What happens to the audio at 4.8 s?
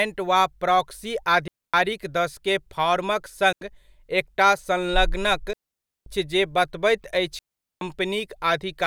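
Nothing goes wrong at 4.8 s; the speech runs straight through that moment without any dropout, click, distortion or other audible fault.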